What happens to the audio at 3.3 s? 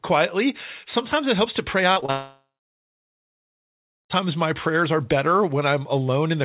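At 3.3 s the audio is silent. This falls inside a gap from 2.10 to 4.12 s, likely a long network dropout. The last sound is stretched into a fading buzz or hiss, then goes quiet. About 2 s is lost before "my prayers are better" returns.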